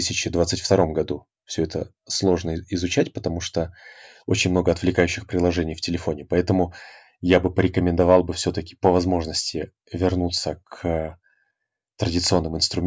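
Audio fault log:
Nothing to log here: no faults turn up anywhere in this speech clip.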